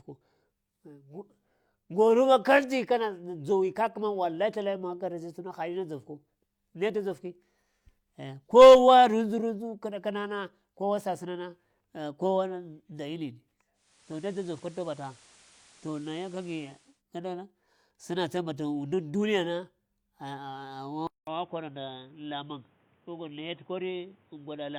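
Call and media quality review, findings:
Digital radio blending to analogue, 13.73–17.03 s. The receiver dropped the digital stream and cross-faded to FM over 477 ms, then back. Level drops about 2 dB, and hiss rises to roughly 30 dB under the speech.

Likely an input switched to a poorer device at 21.07 s, lasting to the end. There is 200 ms of silence at the switch, then a narrower band. Level falls roughly 5 dB, with new noise around 35 dB down. The speech turns dull and boxy.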